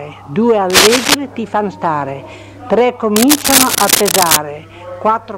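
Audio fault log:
0.70–1.15 s and 3.16–4.37 s, cable scratch noise: dense, uneven scratching rides over the sound, about 5 dB louder than it in the first burst and about equal in the second. It is likely a worn cable or connector whose contact flickers as it moves. Spectrograms show ragged broadband vertical streaks, and waveforms show clustered jagged spikes.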